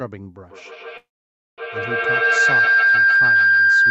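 Feedback howl runs from 0.47 s to the end: the loop between microphone and loudspeaker keeps gaining, building a tone around 1.5 kHz that repeats about every 150 ms and peaks about 17 dB above the speech.

A call audio freeze follows at 0.97 to 1.60 s. The sound trails off into 550 ms of silence, likely because delayed packets emptied the jitter buffer, then resumes with nothing missing but 0.6 s later.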